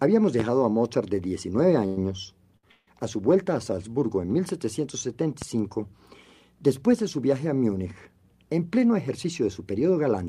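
At 0.40 to 0.43 s a loud pop lands on the sound, likely a sudden voltage step from a switch, plug or static discharge. It is a single sharp thump well above the level of the surrounding audio, which continues unbroken beneath it.

From 1.86 to 1.98 s comes a call audio freeze. Packets were likely held up in transit, so the jitter buffer emptied and the receiver kept extending the last sound for about 105 ms. That fill is heard as a fading buzz, after which the audio resumes exactly where it stopped, with nothing lost.

At 2.57 to 2.64 s a short stall from a late packet occurs. One packet missed its slot, and the receiver stretched the preceding sound by 64 ms until it turned up. The result is a briefly held sound with a slight buzzy dip.

A second freeze follows at 2.71 to 2.88 s, again likely from delayed packets. This time about 159 ms is filled, including 30 ms of silence as the concealment dies away, before playback picks up intact.

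A second loud pop, at 5.42 to 5.45 s, has the same likely cause as the first and is somewhat less prominent.

From 8.58 to 10.25 s a jitter buffer speed-up shortens a backlog of buffered audio. The receiver trimmed away about 150 ms in small pitch-period slices, so the sound runs at 108% speed with unchanged pitch and feels slightly hurried.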